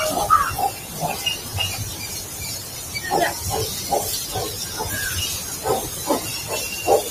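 From 0.72 to 0.96 s, sound cut by the noise suppressor: it mistook part of the audio for noise and pulled it down by up to about 5 dB. Unlike a dropout, the sound thins and sinks rather than vanishing, its steadier parts dimming.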